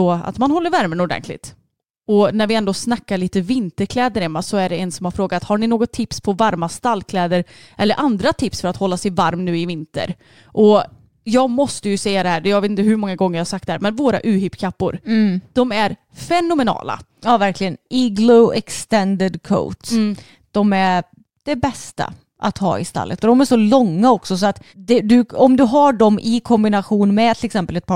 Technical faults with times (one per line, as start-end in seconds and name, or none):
0.33-27.77 clock slip clicks